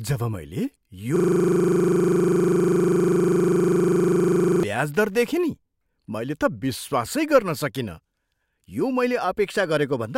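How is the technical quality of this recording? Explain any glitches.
The recording has one serious glitch, a system hang loop from 1.16 s to 4.63 s. For about three and a half seconds the sound hardware kept replaying a single 40 ms slice of its ring buffer while the system stalled, repeating it roughly 87 times at 25 Hz. That loop length, consistent with a 40 ms buffer, produces a hard, rapid rattle-buzz where the speech should be. Unlike a dropout or codec warble, every cycle is an identical copy, giving a rigidly steady, mechanical pulse.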